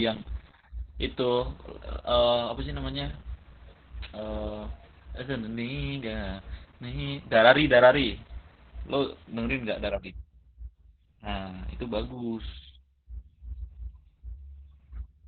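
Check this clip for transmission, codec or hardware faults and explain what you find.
The clip has one fault throughout: Opus voice compression. The speech sounds muffled, hoarse and slightly robotic, which fits SILK linear-prediction coding at a very low rate, roughly 8 kbps. At that rate the codec narrows the band to 4 kHz and codes the excitation coarsely. A spectrogram would show speech energy stopping abruptly near 4 kHz, with smeared harmonics below.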